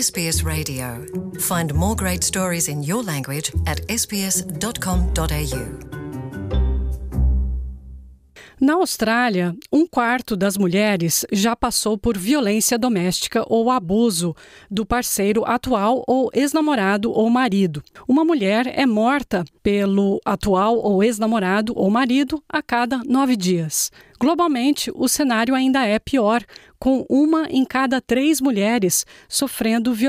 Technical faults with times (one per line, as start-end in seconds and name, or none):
none